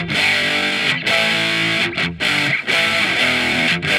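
Nothing stood out as a technical problem on listening to the recording.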